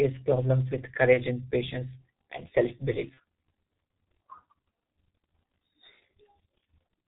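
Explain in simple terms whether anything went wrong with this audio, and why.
The whole recording sounds muffled and hoarse, with smeared consonants and no crisp high end. That is the G.723.1 codec, an old internet-phone format that throws away everything above 4 kHz and updates its model of the voice only every 30 ms, so fine detail is lost.

At 1.13 to 1.19 s, just before "and patience and", and again at 3.14 to 3.19 s, the sound briefly turns into a fading buzz or noise. This is VoIP packet loss concealed by the speech codec: a piece of audio, likely one 30 ms packet, went missing, and the decoder filled the gap by stretching the last sound it had.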